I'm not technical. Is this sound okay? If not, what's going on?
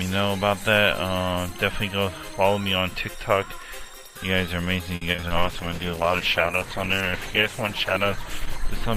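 No, there are two problems, both in the second half.

From about 4.95 to 5.42 s there's repeated packet loss, which gives that robotic sound. Chunks of the audio never arrived in time, five separate times in under half a second, the longest hole about 60 ms. Each time, the system papered over the hole by stretching out the last bit of sound it had. Around two-fifths of that stretch is filler, so it comes out choppy.

Right after that, from about 5.37 s to the end, there's a call bitrate drop. The connection seemed to get squeezed, so the system had to send the sound using far less data, a big cut that lasts about 3 seconds at its lowest. With so little to work with, it drops the fine detail and the crisp high end, and the sound turns rough, watery or muffled for the rest of the clip.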